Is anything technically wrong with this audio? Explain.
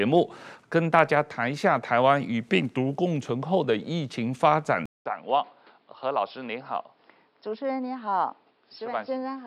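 Yes. Input switched to a poorer device at 4.86 s, lasting to the end: the recording likely moved mid-take to a narrower-band microphone. After a 200 ms silence, speech loses everything above 5.3 kHz, turns dull and boxy, drops roughly 10 dB, and gains background noise about 35 dB beneath it.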